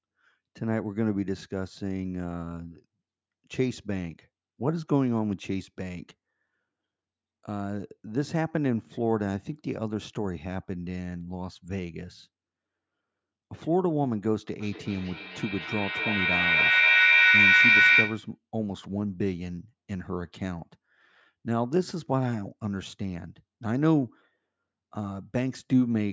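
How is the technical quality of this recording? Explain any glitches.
The recording has one glitch, a feedback echo between two devices. From 14.6 to 18.4 s, a nearby device replays the call and this microphone recaptures it, so sounds repeat roughly every 300 ms. The repeats build to about 8 dB above the speech, and on a waveform or spectrogram they appear as stacked, evenly spaced copies.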